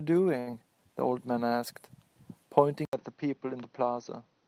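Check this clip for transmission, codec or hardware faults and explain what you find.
Three faults show up in this speech clip: two network glitches packed close together near the start, and a drop in input quality for the last stretch.

From 0.39 to 0.50 s there is a short stall from a late packet. A packet missed its playout time, the jitter buffer ran dry, and the receiver held the last sound for about 73 ms until the packet arrived. Playback then resumed where it left off, so nothing is lost. The cost is a sound dragged out too long with a faint buzz or dip, and the whole stream now runs about 73 ms later than before.

Right after, from 0.51 to 0.55 s, comes a short concealed packet loss. About 40 ms of audio never reached the decoder in time. The receiver extended the preceding sound to cover roughly 16 ms of that and then crossfaded back into real audio. It also caught up on some of the earlier delay, roughly 20 ms, so the rest of the gap was skipped. 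This sounds like a quick smear or wobble, and a brief consonant-like sound may be swallowed.

From 2.85 s to the end, the input was likely switched to a poorer device, such as a different microphone or a headset in call mode. The switch opens with about 80 ms of silence. After it, nothing above 6.2 kHz comes through, the level is about 5 dB lower, and there is a new noise floor about 40 dB below the signal. The result is a duller or boxier, quieter sound with faint added noise.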